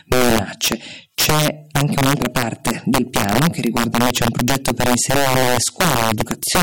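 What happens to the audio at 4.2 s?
Integer overflow is present at 4.2 s, as it is across the whole speech clip. The signal is driven about 6 dB past the integer limit, and instead of being held at full scale, samples that exceed it wrap around to the opposite extreme. Only a small share of samples, around three percent, cross that limit, but each one jumps across the entire range. The result is harsh, violent cracks on the louder speech peaks, far sharper than ordinary clipping.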